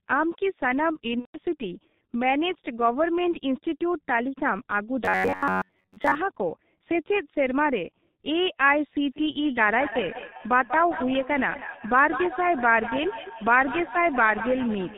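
The whole recording has passed through the G.723.1 codec at 6.3 kbit/s, and the damage is heavy. The codec discards everything above 4 kHz and refits its model of the voice only once every 30 ms frame. As a result, the speech sounds muffled and hoarse throughout, and consonants lose their edges and smear into the vowels around them.

From 1.19 to 1.39 s there is VoIP packet loss concealed by the speech codec. About 150 ms of audio never arrived, which points to roughly five consecutive 30 ms frames going missing. To cover the gap, the decoder kept re-synthesising from the last pitch and spectral envelope it had received and turned the gain down step by step. The speech there stretches into a fading, buzzy drone, and because each frame builds on the one before, it stays weak briefly after real packets resume.

Between 5.05 and 6.15 s the audio turns into robotic sound from repeated short buffers. 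Audio likely reached the playback side too seldom, so the software filled the time by looping a short chunk of recent audio while fresh material was dropped, with roughly two-thirds of the stretch made up of repeats. The repeats impose a fixed 93.8 Hz buzz, which fits a loop of about 10.7 ms. The speech becomes a rigid, metallic drone that only loosely tracks the syllables.

From 9.05 s to the end there is feedback echo between two devices. A second device in the same room played back the call, and the first device's microphone captured it again. Its echo canceller had no reference for that sound, so it passed through. Each phrase returns about a fifth of a second later, peaking at about 9 dB below the speech, and sounds thinner and ringier on each pass.

Inside that echo, at 10.37 to 10.41 s, a second concealed packet loss replaces about 30 ms, consistent with a single lost frame. It produces a brief buzzy blip and a momentary dip in level.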